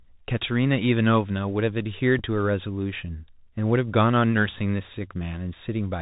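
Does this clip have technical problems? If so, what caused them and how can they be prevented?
Yes. The speech runs through the Bluetooth CVSD headset codec from start to end. Nothing above 4 kHz survives. The damage is plainly audible: s sounds turn scratchy and a granular hiss sits underneath. The grain fits a 64 kbps one-bit stream. Prevent it by switching the headset to a wideband profile or using a wired microphone.

At 2.19 s there is a Bluetooth headset packet repeated. A gap of about 3.8 ms was filled by replaying the previous chunk. It is heard as a small isolated tick, which points to one lost packet. Prevent it by keeping the headset close to the phone and away from Wi-Fi interference.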